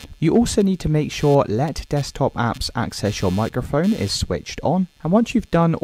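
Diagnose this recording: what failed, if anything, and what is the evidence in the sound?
A buzzy, chirping texture runs under the whole recording, pulsing at a rate of around 150 Hz and sitting roughly 30 dB below the sound itself. It does not follow the audio's loudness or timing. This is computer activity noise entering at the analogue wiring stage: changing load from the processor, graphics card or mouse shifts the ground that the audio circuit shares with the computer, and that varying ground current becomes audible as this pulsing buzz.

From 0.34 to 0.59 s the loudest moments take on a brief crackly, gritty edge. This is hard clipping. The signal was driven about 2 dB beyond what a stage could pass, most likely at the converter or in a sample-format conversion, so the peaks were sliced flat. Those flattened tops add high harmonics, and because the overload is small they show up as crackle on the peaks rather than as continuous fuzz.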